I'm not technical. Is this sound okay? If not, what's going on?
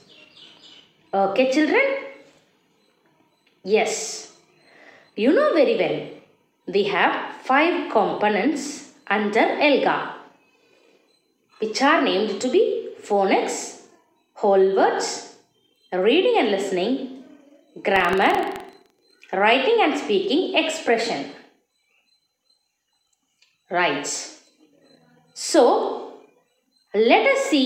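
No. From 17.92 to 19.26 s there's buffer tearing, a rough robotic rattle at about 23 times a second. Playback slipped out of step, so about half a percent of each chunk is audio from roughly 0.15 seconds earlier, spliced in with hard joins.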